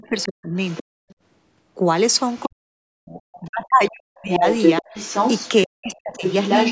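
From the start to 0.97 s, an echo canceller likely caught in double talk pulls the talker down by as much as about 40 dB, for about half a second in all. Over the same stretch, 0.06 to 1.14 s, the other side's voice leaking through, likely from imperfect echo removal, sits about 15 dB under the speech. Fainter leaks follow at 2.29 to 2.48 s, about 30 dB down, and 3.35 to 3.48 s, about 25 dB down. From 2.47 to 4.87 s, speech suppressed in double talk pulls the talker down again, totalling around 1.5 s at up to about 40 dB. From 4.19 s to the end the leaked voice reaches roughly the talker's own level, while 5.65 to 6.24 s brings a further dip of up to about 40 dB.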